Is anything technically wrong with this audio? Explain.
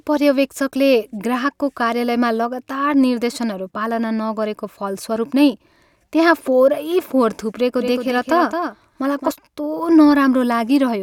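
Yes. From 7.77 to 9.31 s the speech carries a doubled audio track: a second full-band copy trails the original by roughly a fifth of a second, about 5 dB quieter. This is likely a second capture through a slower path being mixed in. Unlike an acoustic echo or reverb, the copy has no decay and no room colouring, and it switches on and off abruptly at those boundaries, producing a clean, mechanical stutter.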